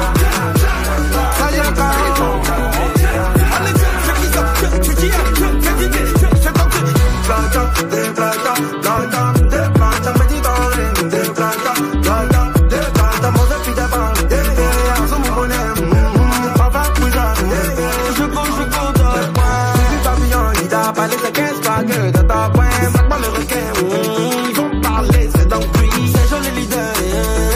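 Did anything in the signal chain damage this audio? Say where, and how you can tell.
No, none of the stages from capture through playback leaves any audible damage on this audio.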